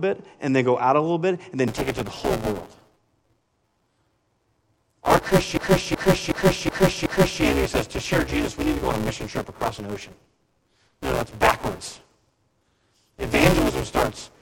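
Buffer tearing starts at 1.68 s, after "a little bit and", and runs to the end. Writer and reader collide each period, leaving roughly half of each buffer about 10 ms stale, which produces a 200 Hz robotic buzz on the speech. A system hang loop from 5.57 to 7.43 s repeats one 371.52 ms slice five times at 2.69 Hz, a skipping-record repeat that fits a 16384-sample ring buffer cycling while the driver froze.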